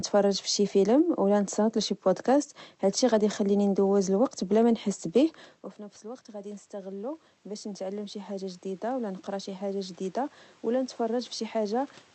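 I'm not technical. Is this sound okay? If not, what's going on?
No. From 6.02 seconds to the end, the voice and background noise slowly swell louder together. That's automatic gain rising: the talker moved away at about five and a half seconds, so the system gradually turned itself up.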